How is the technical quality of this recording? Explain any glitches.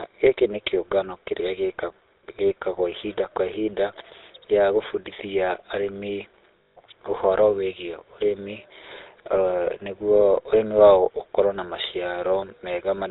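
The technical quality is poor. The speech has passed through a GSM full-rate codec, and there is one dropout in the middle.

Throughout, the GSM full-rate codec models the vocal tract and drives it with a sparse, regularly spaced pulse excitation, which fits a 13 kbps full-rate link. Nothing above 4 kHz survives, so the speech sounds muffled, with a plainly audible buzzy, gravelly roughness.

From 6.62 to 6.77 s there are lost GSM frames. The decoder replaced the missing data by repeating the last good frame's settings over 140 ms, which fits about seven 20 ms frames. The speech is briefly held as a rough, metallic ring.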